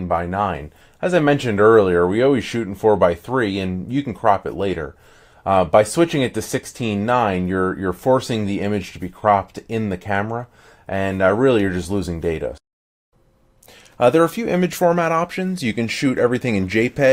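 No technical faults are audible anywhere in this recording.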